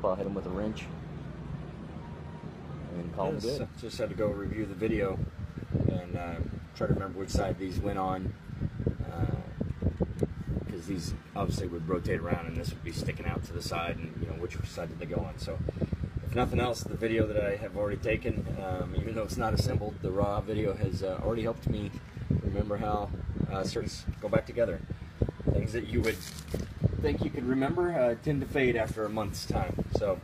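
The audio jumps forward twice, at 3.58 s and at 23.78 s. This is compressed frames skipped: roughly 200 ms and then about 300 ms of audio go missing, which fits whole 46.4 ms codec frames being lost or rejected by the decoder.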